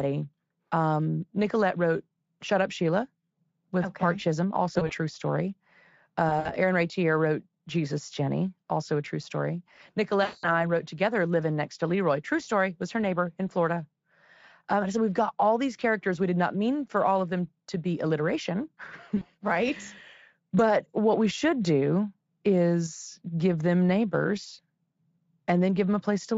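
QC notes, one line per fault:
4.73–4.92 s, 6.29–6.55 s, 10.23–10.67 s, 19.17–19.26 s: VoIP packet loss concealed by the speech codec. About 60, 80, 200 and 40 ms of audio are missing. The decoder extrapolates the last pitch and filter, giving a buzzy or noisy smear that fades. The longest is after "also a true story".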